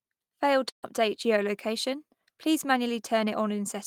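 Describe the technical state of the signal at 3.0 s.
At 3.0 s the speech signal is intact, with no fault audible at that moment.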